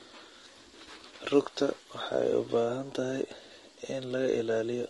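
Low-delay AAC compression runs throughout this speech clip, and the damage is plainly audible. The voice sounds rough and grainy, with noise filling the gaps between harmonics and a top band that seems thinned or synthetic. The likely cause is a low-delay coder of the AAC-ELD kind, whose very short frames resolve pitch harmonics poorly and spend bits inefficiently. The plainly audible roughness fits a low bitrate of around 32 kbps.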